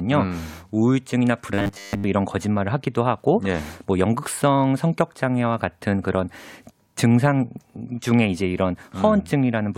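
From 1.54 to 2.06 s the speech turns into a rigid metallic buzz at 100 Hz, robotic sound from repeated short buffers, likely a 10 ms chunk looping in for most of the stretch.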